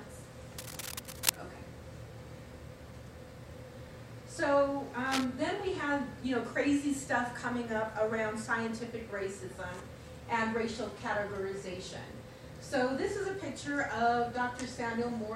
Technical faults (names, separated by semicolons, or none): cable scratch noise